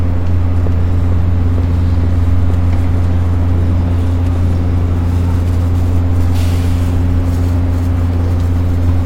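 No technical faults can be heard at any point in the sound.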